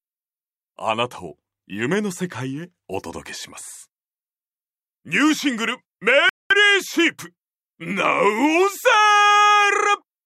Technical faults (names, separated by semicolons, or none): rebuffering stall